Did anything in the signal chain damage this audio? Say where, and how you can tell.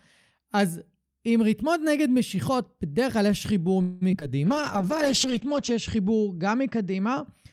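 Yes. A call audio freeze, likely from network packets held up until the jitter buffer ran dry, shows at 3.81 to 4.03 s. The receiver stretches the last sound across about 0.2 s with no silence, then resumes exactly where it stopped, so nothing is lost but everything after arrives later.

Short concealed packet loss follows in the network and decoder stage, at 4.11 to 4.15 s and 4.21 to 4.23 s. Packets covering about 20 ms each missed the decoder, which patched the holes by extending the preceding sound, leaving brief smears or wobbles.

A call bitrate drop in the codec stage runs from 4.47 to 7.32 s. The bandwidth estimate fell, pushing Opus from 48 kbps to 9 kbps for about 1.2 s at the lowest. Audio bandwidth shrinks from 20 kHz to 8 kHz, so the sound turns muffled and rough.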